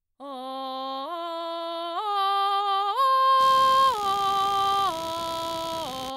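Computer activity noise enters at 3.40 s and continues to the end of the clip. Changing load on the computer's processor, graphics card or mouse is shifting the ground that the audio circuit shares with it, so that electrical disturbance rides into the signal path. It comes through as a pulsing, buzzy chirp repeating around 70 times per second, sitting roughly 15 dB below the music and following the machine's activity rather than anything in the music.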